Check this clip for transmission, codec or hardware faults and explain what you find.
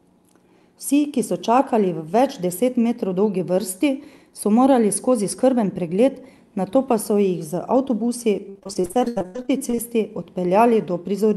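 There's one real problem here, a burst of repeated packet loss giving that robotic sound near the end, with the call-codec band limit at around 12 kHz sitting in the background.

From 8.49 to 9.77 s, just after "z avtobusi", the speech turns choppy. Packets kept dropping or arriving late, and each hole got papered over by stretching the last bit of sound before the next one hit. There are many short gaps, the longest about 84 ms, and roughly half of that stretch is patched-in filler rather than real signal, so chunks of speech are simply missing.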